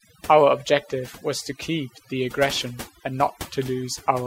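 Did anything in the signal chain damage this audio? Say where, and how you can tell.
Yes. Overdone noise removal during processing damages the speech from start to finish. The suppressor was set so aggressively that any frequency band near its noise estimate is pulled almost to nothing, taking soft speech detail with it. You hear near-silent gaps sprinkled with twinkling specks. On a spectrogram the background becomes black with isolated flickering dots, and the edges of the speech look ragged and eaten away.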